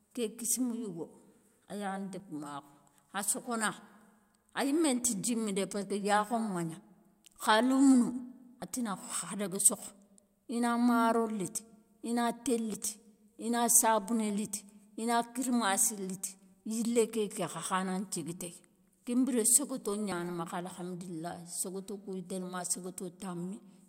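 At 8.62, 11.58, 12.74, 14.3 and 20.12 s the speech lurches forward with no gap, as if a sliver were snipped out and the edges butted together. The jumps at 8.62, 11.58 and 14.3 s skip roughly 70 ms. Those at 12.74 and 20.12 s lose around 40 ms. The likely cause is a dropped buffer (overrun): the recorder fell behind and the hardware overwrote unread samples.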